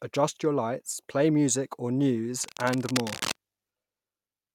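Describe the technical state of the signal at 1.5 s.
At 1.5 s the speech signal is intact, with no audible technical fault at that moment.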